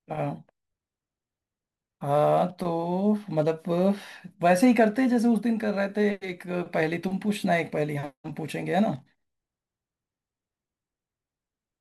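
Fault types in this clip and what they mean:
Sample clock jitter: a faint hiss and grainy roughness ride on the speech throughout, thickening on loud and bright sounds and vanishing in pauses. The converter's clock wanders by a few microseconds, so samples land early or late, leaving error roughly 35 dB below the signal.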